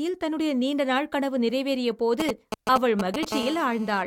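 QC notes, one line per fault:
2.2–3.25 s, GSM signalling bursts: a galloping dit-dit-dit run of short buzzes cuts in at roughly the level of the speech. A 2G handset close by is sending brief groups of radio bursts, as it does while signalling before a call or text, and the audio circuitry rectifies that RF into audible pulses. The bursts within each group repeat at about 217 Hz, which gives the short buzzes their hard, rasping pitch.
3.32–4.02 s, GSM phone buzz: a steady, harsh 217 Hz buzz full of harmonics sits about 11 dB below the speech and bears no relation to it. A nearby 2G handset is now in a call, transmitting its TDMA bursts continuously 217 times a second. The audio circuit detects the RF envelope, and the squared-off on-off pulses produce that raspy, harmonic-rich tone for as long as the call continues.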